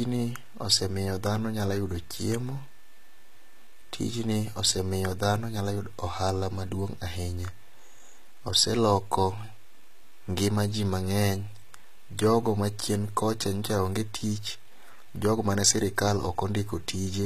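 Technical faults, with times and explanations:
Throughout, HE-AAC compression. The speech carries plainly audible codec damage, and nothing survives above 14.9 kHz. S sounds turn gritty and lispy. The treble is likely rebuilt from copied lower bands, so harmonics misalign, which fits a bitrate near 20 kbps.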